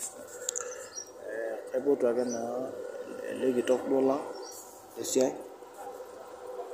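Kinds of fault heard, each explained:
No technical fault can be heard anywhere in this speech recording, which stays steady and intact throughout.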